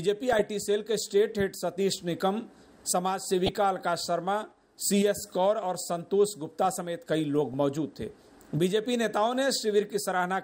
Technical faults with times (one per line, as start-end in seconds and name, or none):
0.33-0.42 DAB burbling
3.46-3.49 DAB burbling
7.53 DAB burbling